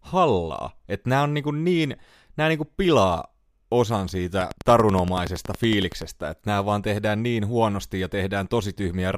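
From 4.41 to 6.03 s, a train of clicks ticks over the speech, stopping just before "että nämä vaan tehdään". Around twenty near-identical pulses arrive at a steady 10.6 per second, poking well above the speech. Electrical interference is the likely cause.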